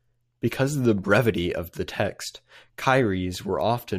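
A short recording of speech, with no technical fault to be heard anywhere in it. Nothing in the audio calls for a time, a value or a cause.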